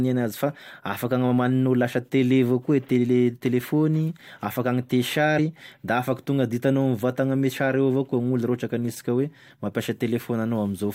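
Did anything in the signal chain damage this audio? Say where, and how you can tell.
Yes. At the codec decoding stage, compressed frames skipped: around three whole frames of about 21.3 ms each never reached the output, so at 5.38 s the speech jumps forward by roughly 70 ms.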